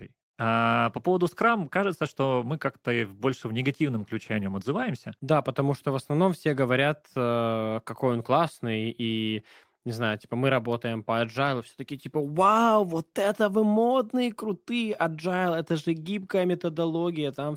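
Nothing in this recording stood out as a technical fault on listening.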